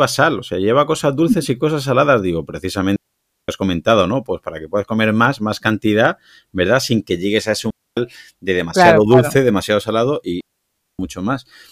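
At 2.96 s the speech drops into a clean hole of near silence lasting 525 ms, ending at 3.48 s. This is a digital wireless dropout: the radio link lost too much data, so the receiver muted with a very fast fade. It happens again at 7.70 s for 266 ms and at 10.41 s for 584 ms. An analogue wireless dropout would bring bursts of hiss or static, but each of these gaps is silent, with no noise before or after.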